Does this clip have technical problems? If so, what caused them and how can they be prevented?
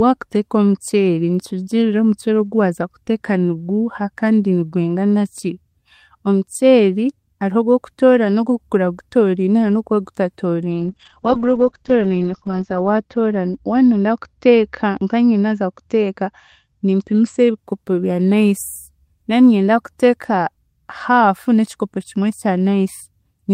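Yes. A call bitrate drop runs from 10.7 to 17.63 s. The call's bandwidth estimate collapsed, forcing the Opus encoder from what sounds like 32 kbps down to about 8 kbps for roughly 2 s. Coarser coding and a band cut from 20 kHz to 8 kHz make the speech rough and muffled until the bitrate recovers. A stable uplink and a sensible minimum bitrate setting would prevent it.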